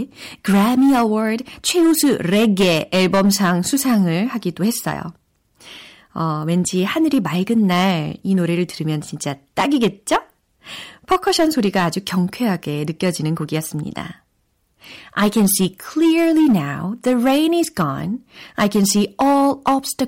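Harsh, gritty fuzz rides on every loud syllable of this speech from start to finish, the sound of hard clipping. The signal was driven about 10 dB beyond what a stage could pass, so a few percent of samples have their peaks sheared flat, adding bright, buzzy harmonics.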